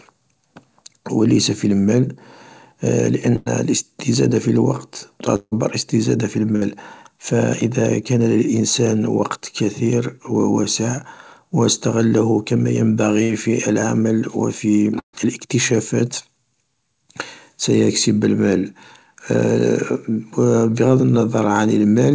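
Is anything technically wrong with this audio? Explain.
Yes. The speech has short gaps where the stream broke up, concealed by the receiver rather than played as sent. The call path is G.722 at 64 kbps, with nothing above 8 kHz.

Burst of packet loss occurs at 3.36–3.48 s, 6.56–6.63 s, 13.23–13.31 s and 14.99–15.15 s, removing about 100, 60, 60 and 140 ms of audio. Consecutive packets were lost, so the receiver extended the last sound and let it fade. Each gap sounds like a brief held buzz or hiss. In the last one, the fill dies into about 100 ms of silence before the speech resumes further on.

The gap at 5.36–5.54 s is longer, about 160 ms missing, and sounds like a fading held tone that drops into about 40 ms of silence before the speech returns with a piece skipped. This is likely a long network dropout, where nothing arrived for a stretch and the concealment ran out before new packets came in, rather than a single lost burst.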